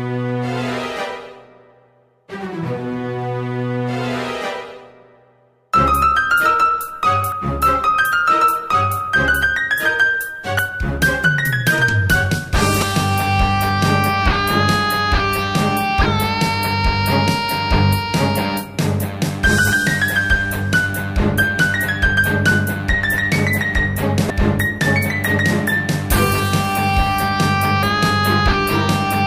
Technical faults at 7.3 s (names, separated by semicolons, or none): damaged data in a compressed stream